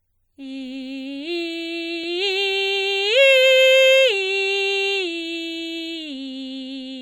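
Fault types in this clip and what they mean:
MP3 compression: the music was likely squeezed through a low-bitrate MP3 encoder, one that sounds like about 64 kbps, which cut the treble and dropped weak frequency components. The damage is plainly audible: a watery, swirly texture, metallic chirps on bright sounds and smeared attacks.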